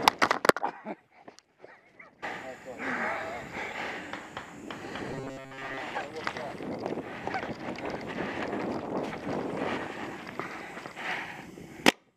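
From 5.12 to 5.80 s the sound turns to a rigid, metallic buzz at 134 Hz that only loosely tracks the original. This is robotic sound from repeated short buffers, likely caused by audio arriving too seldom, so a short chunk of about 7.5 ms is replayed in place of the skipped material, for roughly seventy percent of the span. On a spectrogram this shows as evenly spaced horizontal lines at multiples of 134 Hz, and the waveform shows one short shape repeating.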